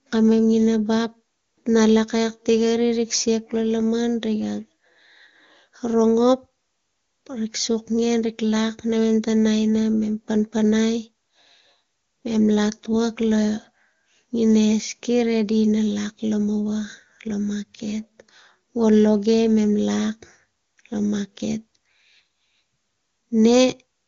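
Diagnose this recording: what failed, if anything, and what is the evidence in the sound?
Nothing failed; no faults.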